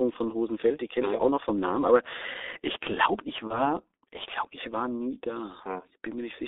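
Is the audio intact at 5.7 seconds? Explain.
No. At 5.7 s, as throughout the clip, the speech carries G.723.1 codec damage. Its narrow band runs from 300 Hz to 3.7 kHz, and its slowly updated voice model, with a bitrate that points to about 6.3 kbit/s, leaves the speech heavily muffled and hoarse, with smeared consonants.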